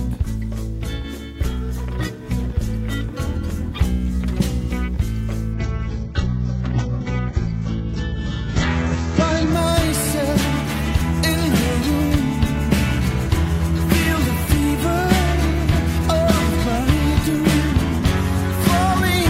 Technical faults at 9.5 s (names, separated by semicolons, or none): adaptive stream at a lower bitrate